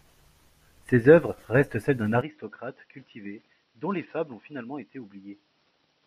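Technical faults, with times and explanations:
2.21–6.07 s, input switched to a poorer device: without a gap, speech loses everything above 5.8 kHz, falls roughly 10 dB and gains faint new background noise, likely another microphone, not mere filtering.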